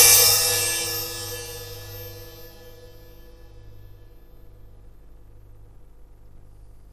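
Throughout, the sound is dull and gurgling, upper bands flickering in and out with granular grit: likely MP2 compression at a starved rate near 80 kbps.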